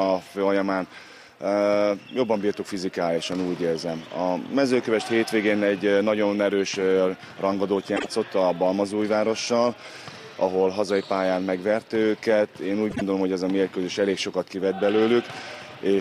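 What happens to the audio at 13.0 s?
At 13.0 s there is a frames-out-of-order fault, spanning roughly 12.90 to 13.02 s. Two adjacent short blocks of audio were decoded in swapped order, so that brief stretch plays with its halves exchanged. The blocks are each about 26.1 ms long, which fits one frame apiece. It is heard as a quick garbled flutter, and no time is lost. On a waveform, the joins show as abrupt discontinuities; on a spectrogram, as thin vertical broadband lines.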